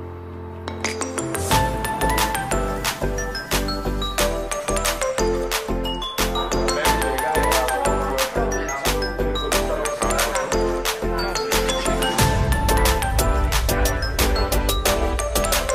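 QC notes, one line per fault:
0.1–15.7 s, clock slip clicks: a soft, steady rattle of single-sample ticks roughly every 30 ms, likely two unsynced clocks drifting around 700 ppm apart.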